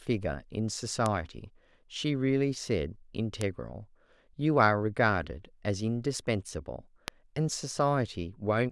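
Bit error spikes land at 1.06, 3.41 and 7.08 s, each a flipped bit that throws one sample, or three in a row at 7.08 s, to about -11 dBFS and straight back. Each is a sharp tick unrelated to the speech, seen as a lone needle in the waveform and a thin full-band vertical line on the spectrogram.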